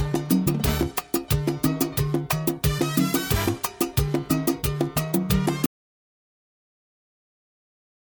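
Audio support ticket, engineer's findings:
Audio dropout to silence at 5.66 s, lasting to end of clip. Sound cuts off abruptly into silence, no room tone or noise floor, unlike a gate or fade. Likely input loss (disconnect, link failure or mute) while the recorder kept writing zeros.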